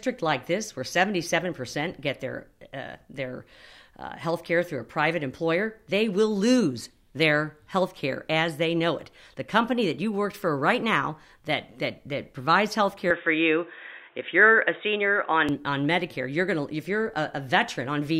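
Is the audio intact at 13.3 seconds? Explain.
No. Right after "that that provides health", at 13.10 s, the sound goes dull and boxy and stays that way until 15.49 s, so 13.3 s falls inside it. The likely cause is an input switched to a poorer device mid-recording: nothing comes through above 3.7 kHz, the level shifts by around 5 dB, and a new noise floor appears roughly 40 dB under the speech. The swap happens without any gap at the switch.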